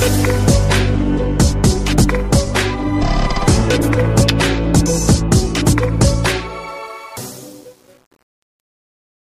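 From 6.68 s to 9.40 s, the fade-out starting around 6.7 s shows truncation distortion: an 8-bit undithered stage quantises the falling level into coarse steps. From 7.06 s it turns gritty, unlike steady dither hiss.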